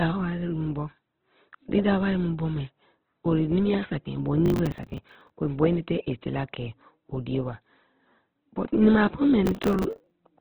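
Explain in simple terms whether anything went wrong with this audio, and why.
The speech was likely squeezed hard by Opus compression working at a very low data rate, which cut its range so nothing above about 4.2 kHz remains. That is why the voice sounds narrow, muffled and grainy, like an old phone line, all the way through.

Twice, from 4.46 to 5.30 s and from 9.46 to 10.11 s, the processor fell behind and missed dozens of short audio deadlines in a row, each around 10 ms. Every miss replayed a scrap of old audio, so you hear processor overload crackle, a gritty tearing over the speech.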